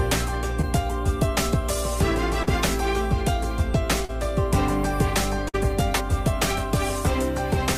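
A real-time audio stream with short concealed packet loss in three spots: around 0.61 to 0.65 s (about 20 ms gone), 2.43 to 2.49 s and 4.05 to 4.11 s (about 40 ms each). Each time the decoder patched the hole by extending the last sound, so you get a quick smear or wobble before it blends back. Then at 5.49 to 5.56 s there's a burst of packet loss: about 60 ms never arrived, the receiver stretched the preceding sound for about 50 ms while fading it down, and the audio picks up further on with that stretch missing.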